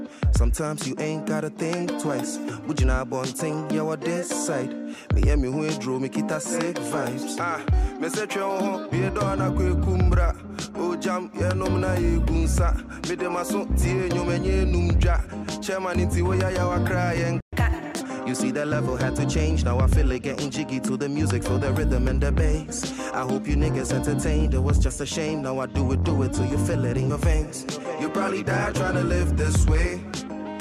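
At 2.47 s the audio jumps forward by about 20 ms, which fits a single compressed frame of 21.3 ms being skipped. Whole frames that were missing or rejected as corrupt never reach the output. On a waveform the envelope shifts abruptly. On a spectrogram a thin vertical seam appears where the harmonic pattern jumps.

From 17.40 to 17.53 s the output falls completely silent for 120 ms. This is a playback stall, most likely the player running out of buffered data or its thread being blocked. The waveform shows a flat, near-silent gap. The spectrogram shows a clean blank column across all frequencies, with the sound resuming sharply at its edge.

Immediately after, from 17.53 to 18.01 s, the player makes up the backlog through catch-up at higher speed. It resamples to 1.25 times normal speed, so tempo and pitch both rise, by about four semitones, then drop back. On a spectrogram the harmonics shift visibly upward for roughly half a second and return to their original spacing. 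The waveform looks compressed in time over that stretch.

At 27.09 s the same frame skip recurs, larger this time. About 40 ms is lost, consistent with two 21.3 ms frames being dropped.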